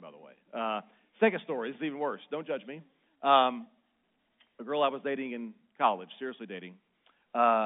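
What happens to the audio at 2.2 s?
Nothing goes wrong at 2.2 s: the speech carries on intact there, still within the narrow band of the G.711 telephone line.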